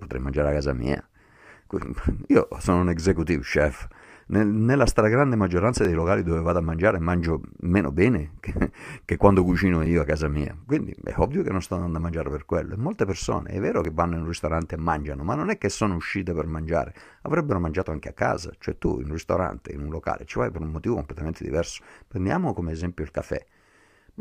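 At 1.86 to 1.88, 5.85, 9.86, 13.85 and 17.83 s, the speech has a tiny skip. This is overlap between stream segments. Neighbouring 4-second segments claim the same moment. About 13 to 21 ms of real sound is cut, and the waveform jumps.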